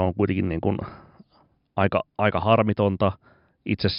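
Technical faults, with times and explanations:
No technical faults detected.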